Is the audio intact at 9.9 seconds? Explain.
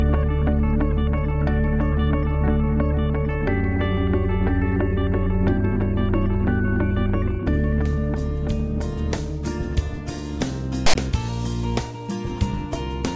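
Yes, at 9.9 seconds the audio is intact, with no dropout, click, distortion or other fault at that moment.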